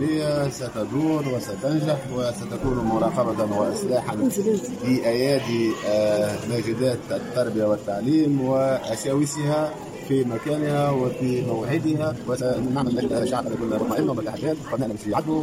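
At 11.97 s the pace abruptly nearly doubles, running about 1.96 times faster through to the end at 15.43 s while pitch stays unchanged. This time-stretched section likely comes from software shortening the passage by dropping short segments, leaving it rushed.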